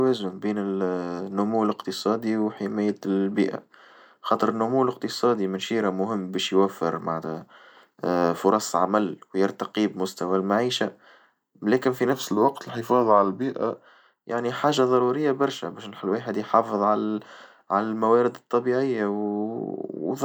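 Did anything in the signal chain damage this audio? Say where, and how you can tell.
Yes. At playback, from 12.13 to 13.76 s, between "لكن في" and "يعني حاجة ضرورية برشا", a wrong sample rate slows the speech to about 0.92 times its speed and lowers its pitch by about 1.5 semitones. Samples were clocked out unconverted, which fits 48 kHz material played at 44.1 kHz.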